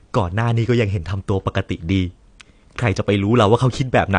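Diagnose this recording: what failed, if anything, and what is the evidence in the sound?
The codec stage is at fault. AAC compression is the likely cause, audible throughout as dull, smeared speech with a warbling, fizzy edge on sibilants. A spectrogram shows nothing above 9.8 kHz, which fits AAC-LC at about 32 kbps lowering its cut-off.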